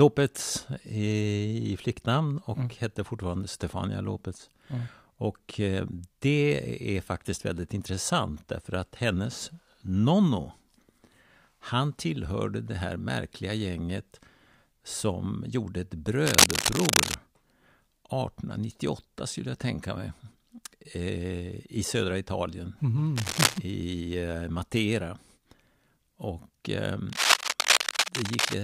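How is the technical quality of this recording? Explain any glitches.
The recording is marred by three bursts of cable scratch noise. The first comes just after "som gjorde ett", from 16.26 to 17.14 s, then 23.16 to 23.58 s, and 27.10 to 28.54 s. These are dense, uneven scratching rustles, about 5 dB above the speech in the first and last bursts and roughly level with it in the middle one. The likely cause is a worn cable or connector being moved, its contact resistance jumping rapidly. On a spectrogram they show as ragged broadband smears, and on the waveform as jagged, irregular spikes.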